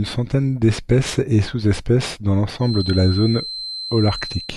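From 2.57 s right through to the end of the speech, a feedback whistle sits underneath everything: a thin, steady tone at 4.1 kHz, roughly 10 dB below the voice. The likely cause is the loudspeaker-to-microphone loop hovering just at the edge of feedback, so that single frequency keeps ringing without building into a full howl. You hear it as a faint whistle, slowly swelling and fading, riding behind the talking.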